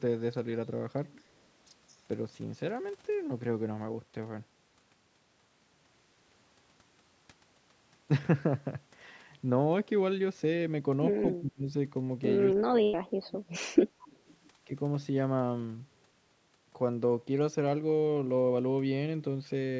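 At 11.35 to 11.74 s the speech sinks sharply, by roughly 30 dB, and again from 12.54 to 13.61 s it drops deeper, by roughly 35 dB, for about a second. This is likely speech suppressed in double talk: with both sides speaking at once, the call's echo canceller mistook the talker for loudspeaker echo and turned the voice down.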